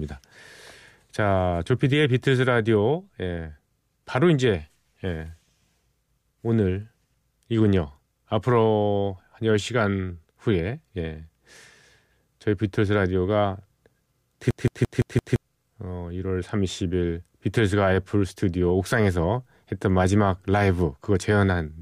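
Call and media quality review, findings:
System hang loop, 14.51 to 15.36 s: one identical 0.17 s fragment replays five times, a stutter at about 5.9 Hz. Host or driver stalled while the audio device kept cycling its ring buffer; the loop length fits an 8192-sample buffer. About a second of audio lost. Distinguishing point: repeats are exact copies at a fixed rate, unlike packet-loss concealment, which varies and decays.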